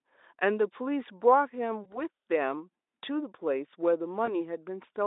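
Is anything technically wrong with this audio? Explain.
Yes, VoIP packet loss concealed by the speech codec at 1.83–2.01 s and 4.25–4.33 s: the decoder extrapolates a missing chunk, which fits one lost 20 ms frame, into a buzzy or noisy, fading smear shown as smeared harmonics and a sagging envelope.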